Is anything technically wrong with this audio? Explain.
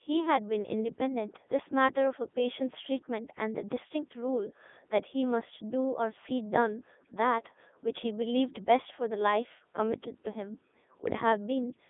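Yes. Throughout, the speech sounds robotic and buzzy, thin and boxed into a band of roughly 250 Hz to 3.6 kHz, with nothing above 3.8 kHz. This is heavy Codec 2 vocoder damage, consistent with its 3.2 kbit/s mode: only pitch, voicing, energy and spectral shape survive, and the decoder rebuilds the voice from sine waves.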